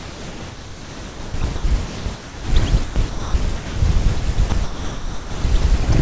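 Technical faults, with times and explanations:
0.00–2.48 s, 2.84–3.76 s and 4.50–5.64 s: sound chopped by the voice detector. Within each span the audio repeatedly gives way to comfort noise, for about 1.98 s, 0.56 s and 0.84 s in total, so the sound has several holes. The likely cause is the sender's voice detector switching transmission on and off. On a spectrogram the gaps appear as smooth, featureless noise bands ending at 8 kHz, the ceiling of the 64 kbps G.722-style call path. On the waveform they appear as an even low-level envelope.
4.20 s: sound dropped by the voice detector. For 20 ms the sound is replaced by comfort noise and then returns. This likely comes from the voice detector treating that moment as background and pausing transmission until it triggered again. A spectrogram would show a thin vertical slice where the structured content gives way to uniform, textureless noise. 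On the waveform the envelope narrows briefly to a flat strip.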